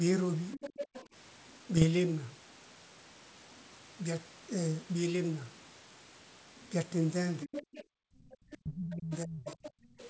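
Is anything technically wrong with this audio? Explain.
Yes. The audio has four kinds of fault, all in the echo-control and transmission chain of a call.

Other side's voice leaking through, 0.52 to 1.06 s and 7.52 to 10.08 s. A second voice sits behind the main talker at roughly 10 dB below it. This is likely residual echo: the far end's audio played from a loudspeaker reached the microphone, and the echo canceller left part of it in the signal sent back.

Speech suppressed in double talk, 0.56 to 0.62 s and 7.45 to 9.57 s. The talker's level sinks whenever the leaked voice overlaps. The first dip is brief, around 20 dB. In the later stretch the drops reach about 30 dB and add up to roughly a second of affected speech. The likely cause is that the canceller, unable to tell near talker from echo, attenuated everything.

Bit errors on an ADPCM link, 1.77 to 1.85 s. A short cluster of pops and rough, grainy bursts with momentary level jumps breaks into the audio. 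Flipped bits on the G.722 link (running at 64 kbit/s) corrupt the decoder's step size and prediction, so each error keeps ringing briefly. This fits a few damaged frames at a low error rate, around 0.2 percent.

Background gated by the echo canceller, 7.84 to 7.98 s and 9.76 to 9.98 s. The room sound abruptly vanishes, about 40 dB down in the first gap and about 28 dB in the second, each lasting under a quarter second. The canceller clamped the microphone hard while the loudspeaker was active, then released it, so the ambience snaps back.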